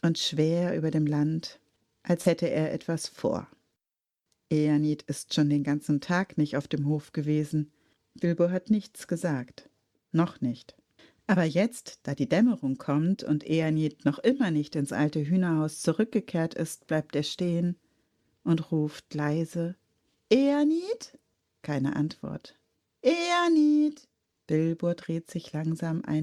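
Short concealed packet loss occurs at 2.21 to 2.27 s, where about 40 ms of the stream failed to reach the decoder in time. The receiver papered over the gap by extending the preceding sound for roughly 41 ms, carrying on its periodicity where it was tonal or substituting shaped noise where it was not, then cross-fading back into the genuine signal. The result is a brief smeared, wobbling patch in the audio rather than a hard dropout.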